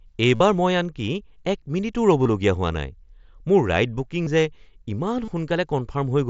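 Concealed Bluetooth headset packet loss hits at 0.35–0.40 s, 2.23–2.26 s, 4.24–4.27 s and 5.25–5.28 s. The receiver patched the missing packets by repeating a best-matching recent stretch of waveform. Each gap becomes a brief buzzy held tone, longest (about 52 ms) at the first, with a slight warble as real speech returns.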